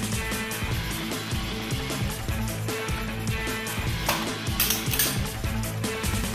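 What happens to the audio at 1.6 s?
Nothing goes wrong at 1.6 s; the audio plays through that moment intact, with no dropout, click or other fault.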